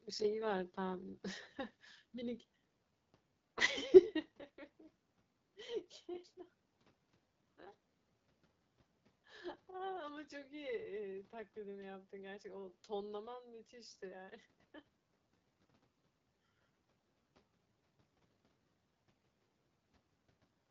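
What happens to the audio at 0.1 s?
The AMR wideband (HD Voice) codec artefacts at 0.1 s run through the whole clip. The codec models speech with a pulse-excited vocal tract filter and fakes the top band with shaped noise, so the speech sounds plainly rough and raspy, fitting a low rate near 8.85 kbit/s, with nothing above 7.6 kHz.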